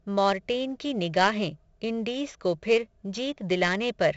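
A speech recording with a gritty hiss riding on every loud syllable and harsh distortion on sharp attacks throughout, and nothing above 7.7 kHz, so it sounds dull. The cause is heavy 4-bit ADPCM compression: each sample is coded as a coarse step from a prediction, and the step size cannot adapt fast enough, which fits a stream at about 64 kbps.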